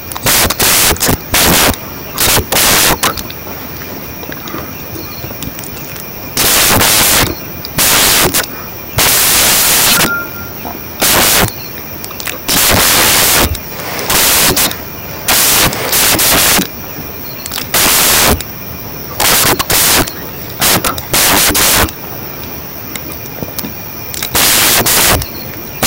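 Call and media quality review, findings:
Samples built from the wrong bytes, throughout the speech clip. Symptom: loud broadband hiss. Probable component: decoder or file reader with misaligned or byte-swapped sample assembly. Mechanism: noisy low-order bits become each sample's large part. Spectrogram: flat full-band noise; waveform: dense fuzz everywhere.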